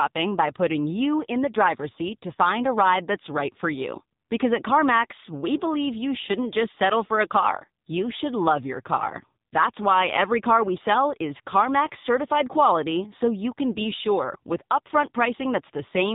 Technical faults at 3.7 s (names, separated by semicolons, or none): AMR narrowband mobile codec